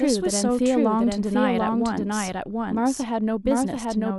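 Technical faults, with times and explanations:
Throughout, doubled audio track: the speech is mixed in twice, most likely because it was captured a second time through a slower path that lagged the first. A second full-band copy trails the original by around 0.7 s at much the same loudness, so every phrase returns as a clean repeat with no decay or room colour, laid over the following words.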